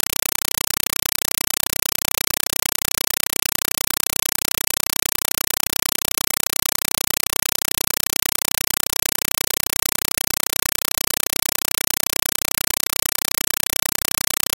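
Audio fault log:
Throughout: compressed stream played as audio. The speech is replaced by very loud, chattering static. An AC-3 bitstream has reached the output as if it were ordinary PCM samples, so it is never decoded. Each coded frame plays as a burst of noise about 5.3 ms long, followed by silent zero padding, repeating 31.25 times a second, every 32 ms. That fixed rhythm gives the static its rattle, and the burst length fits a 256 kbps stream.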